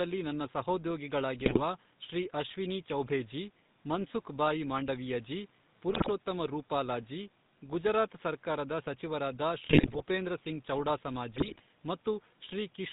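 It's a speech recording squeezed through the GSM full-rate codec, and you can hear it the whole way: that gravelly, buzzy texture comes from the vocal tract being rebuilt over a coarse, regularly spaced pulse excitation, and everything above 4 kHz is simply gone, so the voice sounds dull and boxy. The rasp fits the old 13 kbps full-rate coder. On top of that there are GSM bit errors in four bursts: 1.38 to 1.61 s, just before "ಶ್ರೀ ಅಶ್ವಿನೀ ಚೌಭೇ ಜೀ"; 5.89 to 6.09 s, between "ಮನ್ಸುಖ್ ಭಾಯಿ ಮಾಂಡವೀಯ ಜೀ" and "ರೂಪಾಲಾ ಜೀ ಗುಜರಾತ್ ಸರಕಾರದ"; 9.66 to 10.02 s, right after "ಜೀ ಗುಜರಾತ್ ಸರಕಾರದ ಸಚಿವರಾದ"; and 11.33 to 11.61 s. Corrupted bits reach the decoder's filter, pitch and gain values, so frame after frame while each burst lasts the spectrum warps and the level jumps, giving squawks, pops and gargling. The longest burst, near 10 s, also has the highest bit error rate, about 4.3%. A faint room noise, about 35 dB below the speech, sits underneath.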